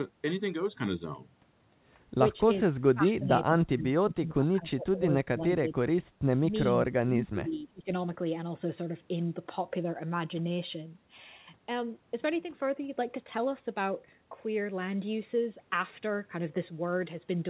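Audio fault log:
2.81–5.03 s, 5.33–5.82 s, 6.85–7.88 s: speech suppressed in double talk. Speech dips up to about 25 dB, breaking up. Likely the echo canceller muting overlapping talk.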